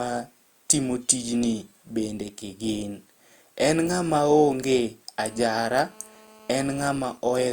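Speech with GSM phone buzz from 5.21 to 6.97 s: a hard, raspy 217 Hz rasp about 26 dB below the voice, from an active call's rectified radio pulses, harsher than smooth mains hum. Then GSM signalling bursts from 7.05 to 7.42 s: even ticks with a longer 217 Hz buzz twice a second at a similar low level, intermittent rather than continuous, as the phone transmits while its user is silent in the call.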